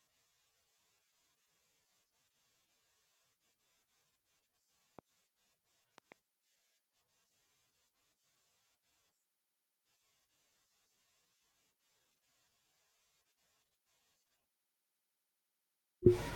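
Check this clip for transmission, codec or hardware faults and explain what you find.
There's a loud pop fault here. A single sharp pop hits at 4.99 to 5.01 s, then a double pop runs from 5.98 to 6.14 s, both roughly ten dB above the speech, which carries on underneath. The likely cause is a sudden voltage spike from a plug, a switch or static getting into the signal chain.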